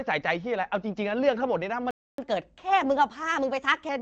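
At 1.91 s the speech just drops out, a playback stall that leaves dead silence for about 275 ms before it picks back up at 2.18 s. It's a clean gap in mid-flow, not a fade or a glitch. The likely cause is the player running dry on data or having its audio thread blocked, so nothing reached the output until it recovered and carried on from where it had stopped.

Right after that, from 2.18 s to 3.89 s, you get catch-up at higher speed. The player works through the backlog by resampling at 1.15 times normal speed, so the talker sounds rushed and pitched up by about two semitones, a slightly chipmunky lift, for that stretch before snapping back to normal rate and pitch. Throughout, the band tops out around 7 kHz, as you'd expect from the AMR-WB (HD Voice) path it's running over.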